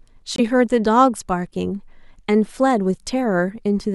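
A Bluetooth dropout occurs at 0.36 s, where the speech cuts to silence until 0.40 s and then picks up mid-flow, as though it had kept playing through the gap. Roughly 21 ms of sound is missing, which fits a single lost packet. The likely cause is that this packet failed to reach the headphones in time and was discarded, so the output had nothing to play until the next good packet arrived. The hole is brief.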